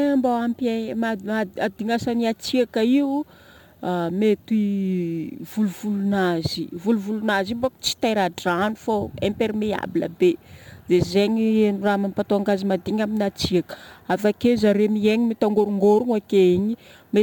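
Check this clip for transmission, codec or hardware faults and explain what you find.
One fault runs through the whole clip: crude rate conversion. A gritty, inharmonic fizz trails the louder, brighter speech, roughly 30 dB down, because samples were repeated without filtering, a pattern that fits a 44.1 to 48 kHz change.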